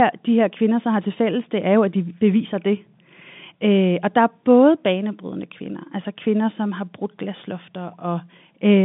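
No technical faults occur anywhere in this speech clip.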